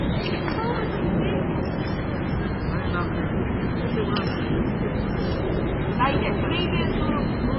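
All the way through, nothing comes through above 5.5 kHz, and the sound swirls and smears, which is likely heavy MP3 compression starved of bits, around 16 kbps.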